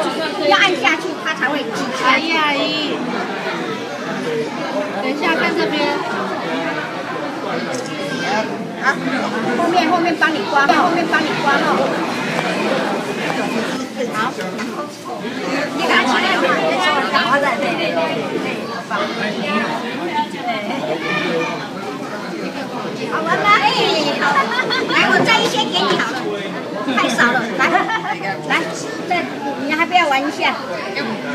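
From 10.69 s to 13.77 s the audio carries a doubled audio track: a second, full-band copy of the same sound runs about a second behind the original at roughly equal level. The copy is dry, with no decay or added room tone, and it cuts in and out abruptly at those boundaries. This is likely the signal being captured twice, once through a slower path, with both versions summed into the mix.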